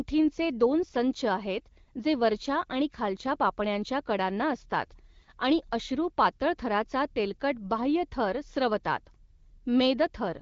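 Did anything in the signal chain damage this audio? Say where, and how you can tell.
No, no stage in the chain damaged this speech; it has passed through an AMR wideband (HD Voice) codec at a rate that fits 12.65 kbit/s, where that coder's light coding loss falls short of damage.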